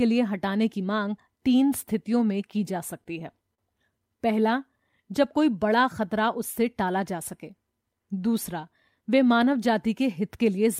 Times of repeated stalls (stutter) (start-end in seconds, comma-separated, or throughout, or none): 3.04-3.59